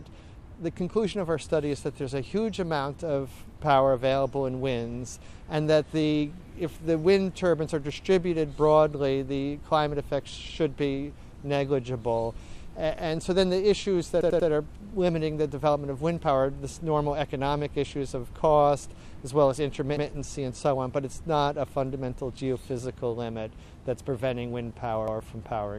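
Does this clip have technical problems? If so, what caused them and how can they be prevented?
Yes, there is a repeated buffer fault. A roughly 93 ms slice of sound plays again with hard joins, three extra times from 14.21 to 14.49 s and once each at 19.97–20.06 s and 25.08–25.17 s. New audio was late, so the device replayed its last block, which fits a 4096-sample buffer. An identical stuttered fragment, rather than silence, sets it apart from a dropout. Larger buffers or more scheduling headroom for the audio thread would prevent it.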